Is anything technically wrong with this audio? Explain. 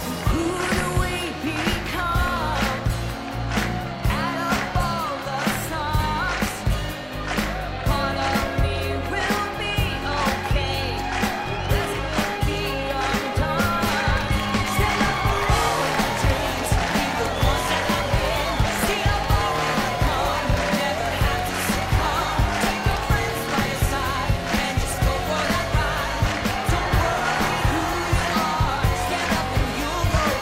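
No, nothing technically wrong is audible anywhere in this recording.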